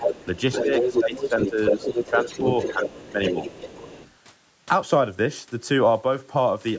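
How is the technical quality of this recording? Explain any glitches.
The recording is compromised in its first four seconds by two related call-audio faults: a second voice bleeding in and the main speech repeatedly ducking. The band stops at about 8 kHz, as the call's microphone processing shapes it.

From 0.00 to 2.41 s and again from 2.58 to 4.11 s, another voice leaks through underneath the speech, as loud as the main talker at first and then somewhat quieter. The likely cause is the other side's voice leaking through: the loudspeaker's sound reached the microphone and the echo canceller failed to remove it.

During that overlap the main speech dips in level at 1.00 to 1.34 s, 1.50 to 1.75 s, 1.94 to 2.45 s and 2.73 to 3.35 s. The drops reach about 10 dB, or a milder 5 dB in the third. This is likely speech suppressed in double talk, where the canceller, unable to separate the two voices, turned both down.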